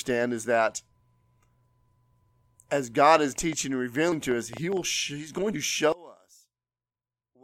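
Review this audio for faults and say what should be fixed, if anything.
A train of clicks runs from 3.18 to 4.78 s: roughly ten irregular pops, about five per second, peaking about 5 dB above the speech. These are likely interference or a faulty connection or power supply. Shield cabling and check the interface's grounding and power.

Compressed frames skipped at 4.11 s and 5.53 s: roughly two and three 23.2 ms frames go missing, jumping ahead about 50 and 70 ms. Verify file integrity and transfer checksums before decoding.

One channel inverted from 5.92 s to the end: the mono sum falls about 27 dB, leaving only a faint difference signal, likely from reversed polarity. Check channel polarity in wiring and the processing chain.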